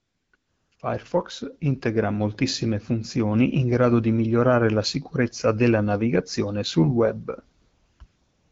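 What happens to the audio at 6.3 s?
Nothing goes wrong at 6.3 s: the speech continues intact through that moment, carried cleanly by the AMR wideband (HD Voice) codec at 12.65 kbit/s.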